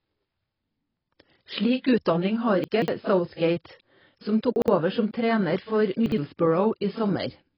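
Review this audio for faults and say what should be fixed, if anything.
Throughout the speech there is a hard ceiling with nothing above 5.5 kHz, and the sound is dull and smeared, with a fizzy, warbling edge on sibilants and held sounds. This is most likely heavy AAC compression, consistent with AAC-LC at a very low bitrate around 16 kbps, where the encoder drops the upper band and starves the rest of bits. On a spectrogram it shows as a flat cut-off line at 5.5 kHz with patchy, blotchy holes below it. To prevent it, encode at a higher bitrate or keep a lossless master.

Chunks out of order occur at 2.64 to 2.88 s, 4.56 to 4.68 s and 6.06 to 6.18 s. At each point a 60 ms chunk plays late. At 2.64 s it lands three chunks after its proper place, and at the other two points it lands one chunk late. Nothing is missing, but the sequence is scrambled, so each spot sounds like a brief jumbled stutter. 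On a waveform these appear as abrupt amplitude steps at 60 ms boundaries. On a spectrogram they show as vertical seams where the formant tracks jump discontinuously. To prevent it, reorder by sequence number or timestamp in a jitter buffer before writing or playback.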